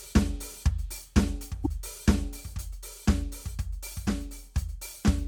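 At about 1.63 s the music skips forward and a brief glitch lasts roughly 30 ms, likely a broken MP3 bit reservoir after a cut in 26.1 ms frames.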